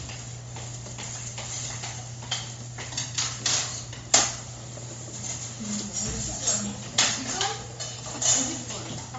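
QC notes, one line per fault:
Throughout, Bluetooth LC3 compression: nothing above about 7.7 kHz, with a grainy, breathy noise filling the upper band. The likely cause is a low-bitrate LC3 link, around 32 kbps with 10 ms frames, whose noise filling sets it apart from a clean low-pass cut.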